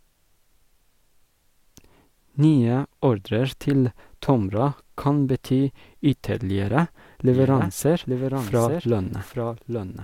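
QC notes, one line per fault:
7.32 s to end, doubled audio track: from 7.32 s a second full-band copy of the speech runs underneath the original, trailing by roughly 0.7 s and sitting about 5 dB quieter, and it continues until the clip ends. The copy begins abruptly, with no decay or room colour, so it sounds like a clean, late duplicate rather than an echo. The likely cause is the audio being picked up a second time through a slower path.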